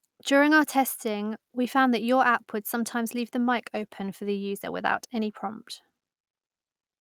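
Just after "app would sometimes leave", from 3.33 s to 5.39 s, a call bitrate drop makes the speech rough and muffled as the encoder codes more coarsely. On a spectrogram the upper frequencies vanish for about two seconds, which fits a fall from 64 to 24 kbps.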